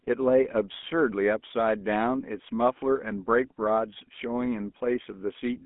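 From start to finish the speech carries the plainly audible damage of the GSM full-rate codec. At a rate that fits 13 kbps, the vocal tract is modelled and driven by sparse regular pulses, leaving a buzzy, gravelly roughness, while the line band keeps only about 200 Hz to 3.4 kHz.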